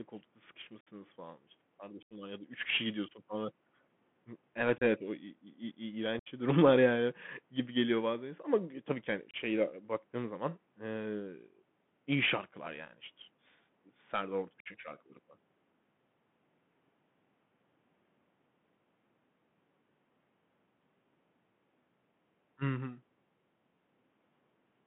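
Throughout, the Bluetooth CVSD headset codec squeezes the speech into about 150 Hz to 3.4 kHz. Its one-bit slope coding adds granular hiss and scratchy s sounds.

Unconcealed Bluetooth headset packet loss follows. Lost voice packets leave abrupt silent holes at 0.81 s, before "falan işte", then at 2.03 s, 4.78 s, 6.19 s, 9.31 s after "gü tabii ki hani", and 14.6 s. Each hole lasts 30 to 83 ms.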